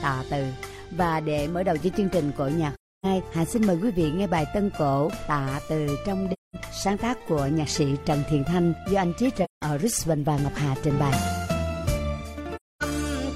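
AAC frame loss with muting occurs at 2.74–3.06 s, 6.32–6.56 s, 9.44–9.62 s and 12.56–12.83 s. The sound drops to silence for about 300, 210, 170 and 260 ms, which fits runs of seven, five, four and six lost frames of about 43 ms each. The decoder zeroed the missing spectra, and the overlapping windows fade the sound out and back in, so each gap is a soft-edged hole.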